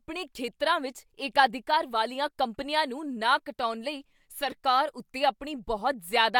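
No technical faults can be heard anywhere in the recording.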